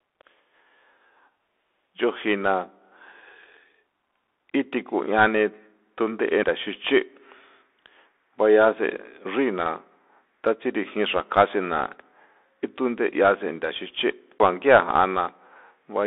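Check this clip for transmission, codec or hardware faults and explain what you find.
Two faults are present: the whole clip runs through a Bluetooth CVSD headset codec, and there are two CD skips.

The Bluetooth CVSD headset codec runs throughout. CVSD codes each sample as a single up-or-down bit with an adapting step size. Here the band is held to about 300 Hz to 3.6 kHz, which fits the 64 kbps narrowband headset link. Plainly audible granular hiss sits under the speech, s sounds turn scratchy, and loud high passages slur where the step cannot keep up. That grainy slope distortion sets it apart from an ordinary band-limited telephone line.

A CD skip occurs at 6.43 s, and another at 14.38 s. In each, the laser jumped to a different turn of the disc's spiral, so the player muted briefly and then resumed from another point. The first mute lasts only a few milliseconds and the second roughly 15 ms. 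Each is heard as a tick followed by an abrupt jump in the speech. Because playback continues from a different place, this differs from a simple dropout, which leaves a gap and then picks up where it stopped.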